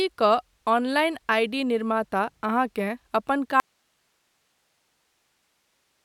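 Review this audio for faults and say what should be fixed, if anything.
At 3.6 s, right after "निर्माता अहाँकेँ अपन", the speech cuts out abruptly and stays gone to the end of the clip, with only a bed of hiss around 45 dB below the speech level. This is an audio dropout to a faint residue, likely a lost connection at the source while the downstream path stayed live. A hard mute would fall to true digital silence, and a natural pause or fade would not break off mid-phrase. Secure and monitor the source connection during recording so a break is caught and retaken.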